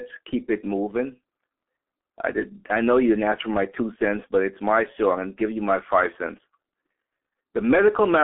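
G.723.1 codec damage runs throughout, with nothing above 3.8 kHz and a narrow telephone band. The speech is muffled and hoarse, with smeared consonants, pointing to the codec's roughly 6 kbit/s mode.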